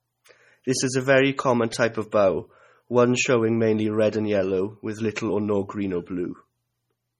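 From start to finish the speech has a watery, swirling quality with smeared onsets and nothing above 17.5 kHz, likely from heavy MP3 compression. The encoder seems starved of bits, which fits a rate around 32 kbps, so faint frequency bands flicker in and out.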